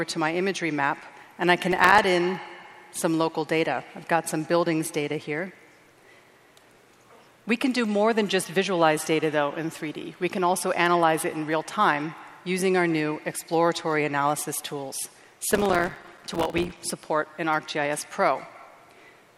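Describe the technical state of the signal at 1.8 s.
At 1.8 s the signal is inside a burst of processor overload crackle running from 1.71 to 2.04 s. Around twenty buffers, each a few milliseconds long, miss their deadline and fall silent, so the gritty crackle comes from a dense run of tiny hard-edged gaps rather than one longer dropout.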